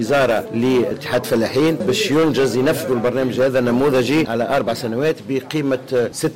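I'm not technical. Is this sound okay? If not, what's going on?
No. Hard clipping runs through the whole clip, from start to finish. The sound was pushed much louder than the recording could hold, so the tops of its loudest moments were sliced off flat, roughly a tenth of the time. Those flattened peaks create extra high-pitched harshness that wasn't in the original, which you hear as a rough, buzzy fuzz riding on every loud part of the sound.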